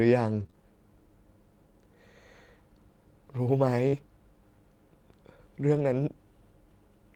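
From 0.39 to 0.54 s, repeated packet loss (robotic sound) leaves three gaps, none longer than 20 ms, each patched by extending the last sound. The close succession makes it choppy rather than a single smear.

At 3.88 to 3.95 s, a short concealed packet loss hides about 40 ms of missing audio with roughly 44 ms of continued sound. This is one isolated hole, so it is heard as a brief smear or wobble, not chopping.

Overlapping its tail, from 3.93 to 3.99 s, and again from 5.75 to 5.81 s, a lost packet is rebuilt from error correction. Each time two packets, 40 ms in all, are replayed from low-bitrate copies. Nothing drops out, which separates it from concealment, but those moments sound rougher and noisier.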